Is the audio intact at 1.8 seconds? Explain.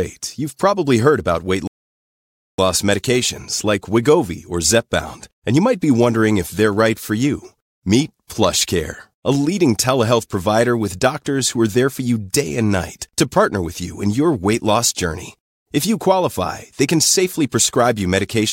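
No. 1.8 s falls inside a rebuffering stall from 1.67 to 2.58 s, where the player ran out of downloaded audio and waited. After "probably heard about weight" the waveform goes flat and the spectrogram blank for 0.91 s, then speech resumes intact at "loss medications like".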